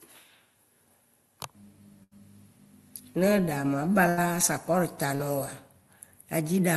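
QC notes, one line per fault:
2.03–2.13 s and 4.09–4.19 s: burst of packet loss. About 80 ms of audio is lost each time. The receiver extends the last sound and fades it, so a short held buzz or hiss replaces it. Audio then resumes further on, with that stretch missing.
5.15–5.21 s: short concealed packet loss. About 40 ms arrived too late to decode. The gap is patched by continuing the preceding sound, then blending back into the real signal. It comes across as a brief smear or wobble.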